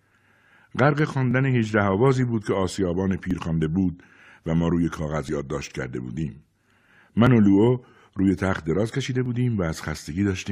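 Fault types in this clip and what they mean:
Overlap between stream segments: two consecutive chunks of the stream claim the same stretch of time, so the player throws away a sliver of speech that wasn't actually repeated, and the waveform jumps across the gap. Here it's a small click or micro-skip at 1.31–1.33, 3.31, 5.29, 7.27 and 9.26 s, each losing only a few to about 20 ms. The steady two-second spacing fits segments two seconds long.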